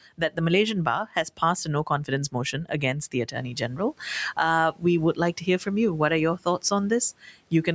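Between 0.18 and 0.38 s, and again between 1.05 and 1.4 s, short parts of the speech sound swallowed and faint, dropping by about 12 dB and then about 10 dB. This is speech cut by the noise suppressor, which mistook quiet speech for background noise and turned it down.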